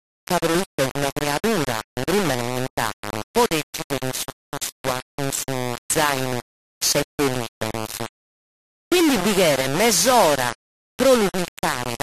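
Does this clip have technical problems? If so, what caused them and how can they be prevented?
Yes. Throughout the speech, a harsh, grainy distortion sits on every syllable, nearly as loud as the speech itself, and quiet tails sputter or drop to silence. The likely cause is low bit depth without dither: samples rounded to about 3 bits, so the error follows the signal. Unlike hiss or broadband noise, the grit drops out or sputters in pauses and changes with the sound. To prevent it, keep at least 16 bits and apply dither whenever bit depth is reduced.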